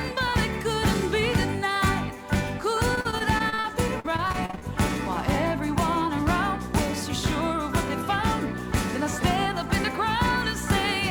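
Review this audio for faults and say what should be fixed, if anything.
Repeated packet loss (robotic sound) runs from 2.95 to 4.64 s. Short holes of up to 43 ms keep arriving in quick succession, each patched by stretching the preceding sound, so about a quarter of this stretch is filler. The result is choppy audio with pieces missing. Preventing it needs a steadier network path and a larger jitter buffer, or forward error correction, so late or lost packets are recovered rather than concealed.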